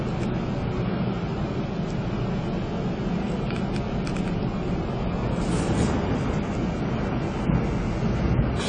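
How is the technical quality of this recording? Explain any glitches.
The recording has plainly audible codec damage from start to finish, most likely AAC compression. The audio is dull and smeared, with a fizzy, warbling edge on sustained sound. Nothing reaches above 9.7 kHz, which fits a low bitrate near 24 kbps. The encoder discards fine spectral detail it judges less audible. On a spectrogram this shows as a hard ceiling at 9.7 kHz, with patchy, gappy energy beneath it.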